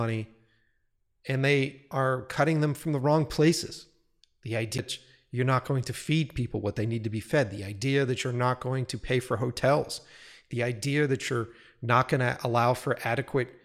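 At 4.78 s, just before "you're not going to", the speech breaks with a small tick and a near-instant silence of about 10 ms, then resumes from a different point in the recording, so the flow jumps rather than continuing smoothly. This is a CD skip: a knock or a surface flaw threw the laser onto another turn of the disc's spiral, and the player briefly muted before picking up reading from the new position.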